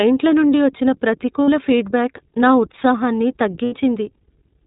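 Throughout the speech, the iLBC codec leaves a clearly rough, slightly synthetic quality. Each short frame's excitation is coded on its own, which fits iLBC's 20 ms mode at about 15 kbps. On a spectrogram, everything above 4 kHz is cut off flat.

Lost iLBC frames appear from 1.45 to 1.49 s (40 ms) and from 3.64 to 3.74 s (80 ms), which matches two and four 20 ms frames. The decoder repeats the last pitch cycle mixed with noise, so each gap sounds like a held, buzzy vowel, and the longer gap fades. On the spectrogram, flat, unchanging harmonic stripes stand in for the missing speech, and the waveform shows a repeating periodic pattern. Normal speech returns immediately after each gap.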